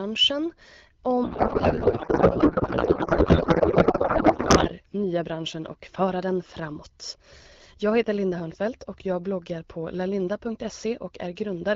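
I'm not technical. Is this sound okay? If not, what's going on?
No. From about 1.23 to 4.69 seconds the speech turns into garbled, warbly noise that barely follows what's being said, and it clears up right before "nya branschen och föra". That's a codec payload misread. The call uses the HD Voice (AMR wideband) codec, and the two ends disagreed on how its data was packed. One side sent padded, byte-lined-up packing and the other read it as the tighter packed kind, so the decoder pulled everything from the wrong spots.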